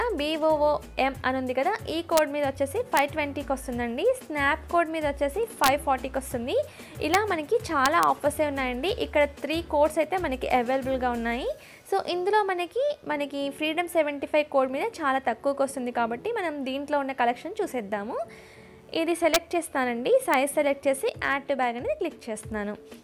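Integer overflow cracks the audio at 2.17, 2.97, 5.64 to 5.68, 7.14, 7.86 to 8.03, 19.34 and 20.34 seconds. On loud peaks the sample values exceed the largest integer the format can hold. Instead of being limited, they wrap to the opposite sign and jump across the full range. The peaks only just pass the limit, by about 1 dB at most. Each one still gives a violent crack, far harsher than clipping.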